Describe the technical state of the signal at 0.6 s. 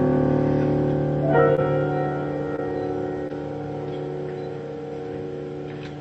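At 0.6 s the signal is intact, with no fault present, only the ordinary character of the WebRTC call path that runs through the clip, whose content stops at 8 kHz.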